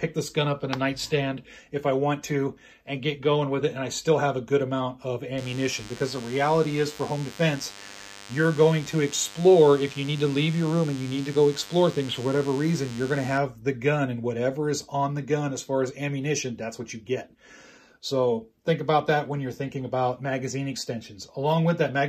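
From 5.38 to 13.38 s a thin, steady buzz sits under the sound: DECT cordless phone buzz. A nearby DECT handset or base station sends a radio burst every 10 ms, and the audio circuitry rectifies it into a 100 Hz pulse train rich in harmonics, some 20 dB below the programme. Mains hum sits at 50 or 60 Hz and sounds rounder. This is a buzzier tone.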